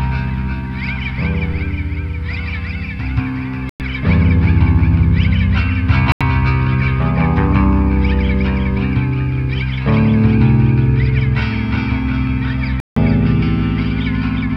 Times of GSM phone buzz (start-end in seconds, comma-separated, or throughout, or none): none